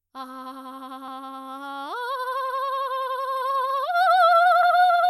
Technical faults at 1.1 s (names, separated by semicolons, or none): compressed frames skipped